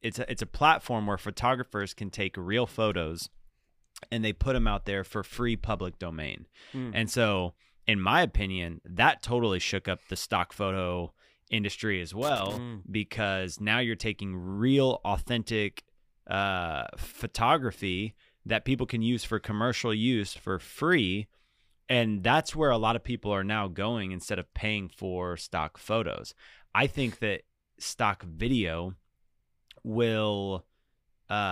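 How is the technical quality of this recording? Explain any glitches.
The speech recording has two short bursts of loose connector crackle, one from 12.22 to 12.58 s and another from 20.29 to 20.41 s. Both sound like the irregular scratchy crackle you get when a worn or dirty contact shifts and keeps making and breaking. Each break chops the signal into ragged fragments, and any DC sitting on the line turns those breaks into pops. The first burst runs about a third of a second, and the second is a quick tenth-of-a-second rasp.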